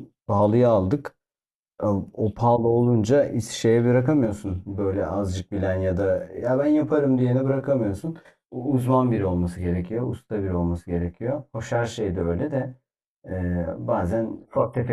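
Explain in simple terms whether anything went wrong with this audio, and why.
From about 4.25 s to the end, one channel runs late by roughly 20 milliseconds, a channel delay (comb filtering). When the two channels are blended, parts of the speech cancel at evenly spaced pitches, so the voice sounds rough or slightly doubled.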